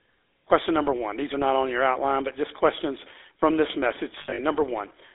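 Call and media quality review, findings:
Buzzy, gravelly speech for the whole clip, band limited to about 300 Hz to 3.7 kHz. GSM full-rate codec: pulse-driven vocal-tract model with decimated excitation.

Rough metallic ringing hold from 4.18 to 4.40 s, after "just questions from this". Lost GSM frames: last good frame repeated, about 160 ms concealed.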